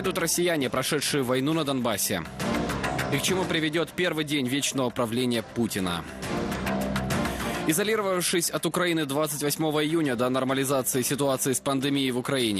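From start to finish, the sound carries plainly audible codec damage. The likely cause is MP2 compression at a low bitrate, about 80 kbps by the sound of it. Layer II divides the spectrum into 32 equal sub-bands and shares a small bit budget among them. Here too few bits are left for the top. Upper bands drop out and return, so the highs flicker. The remaining bands are coarsely quantised. The result is dull and gurgling, with a granular grit.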